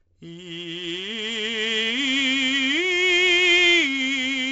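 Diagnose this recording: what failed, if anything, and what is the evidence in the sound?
The codec stage failed. The music carries 4-bit ADPCM compression for its whole length. A gritty hiss rides on every loud passage and distortion smears the sharp attacks, where the adaptive step size lags behind sudden jumps. Nothing is heard above about 7.8 kHz, which fits a 16 kHz sample rate at 64 kbps. Unlike steady tape or analogue hiss, this heavy noise rises and falls with the music's level. It lacks the swirling, watery quality of MP3-style codecs.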